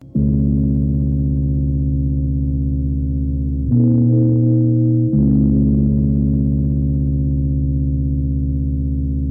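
No technical faults can be heard in this music.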